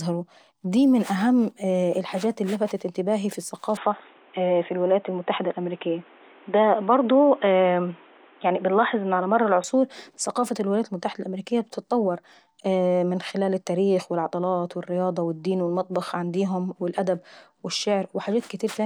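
From 3.77 s to 9.64 s the speech turns dull and boxy, with nothing above 3.8 kHz, then clears again. The likely cause is an input switched to a poorer device. There's no gap at either switch and little level change, but a new noise floor sits roughly 30 dB down.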